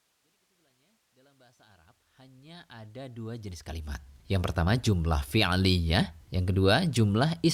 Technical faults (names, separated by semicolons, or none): none